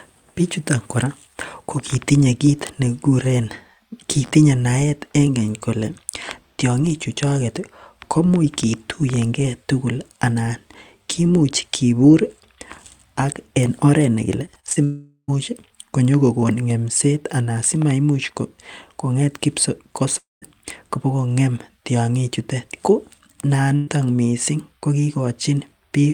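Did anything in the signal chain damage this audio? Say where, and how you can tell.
Yes, the damage happened on the network leg, and it shows up in three distinct ways.

Right after "en oret nekile", from 14.45 to 14.78 s, there's a stretch of repeated packet loss with that choppy, robotic sound. Five short holes land in about a third of a second. The longest is 34 ms, and about 120 ms of audio is lost in total. The receiver patches each hole by stretching the last bit of sound, so roughly a third of that span is concealment rather than real signal. That's where the robotic texture comes from.

Then come two long network dropouts. The first runs from 14.84 to 15.30 s, with about 440 ms gone. The second runs from 20.18 to 20.44 s, with about 240 ms gone. In both, the sound smears into a fading buzz or hiss and then goes quiet. The first ends in about 50 ms of silence, the second in about 170 ms. 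When the audio returns it has jumped ahead, and the missing chunk never comes back. A stalled stream is the likely cause.

Finally, a burst of packet loss at 23.76 to 23.98 s, just before "missing ko". About 120 ms went missing here. The receiver held the last sound and faded it down instead of dropping to silence, so you hear a brief held buzz or fading hiss. The audio then picks up further along, with the part in between simply skipped.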